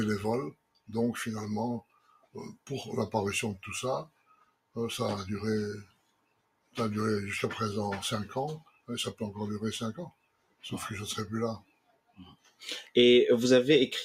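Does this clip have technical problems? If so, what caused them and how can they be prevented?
Yes. The level pumps and thins throughout the clip, with sustained parts repeatedly sinking while sudden onsets still come through, a swing of around 20 dB. A speech-tuned noise suppressor left running on non-speech audio misreads steady tones, ambience and decays as noise and pulls them down. To prevent this, bypass the noise suppressor, or switch it to a music or original-sound mode, whenever the source isn't speech.

The sound cut by the noise suppressor is clearest at 0.52–0.89, 1.81–2.35, 2.53–2.69, 4.05–4.76, 5.84–6.77, 8.6–8.89, 10.09–10.64 and 11.59–12.63 s. The longest dips last roughly a second, and the drops reach about 20 to 21 dB as the suppressor classes these stretches as noise. Turning suppression off for this kind of material prevents these dropouts.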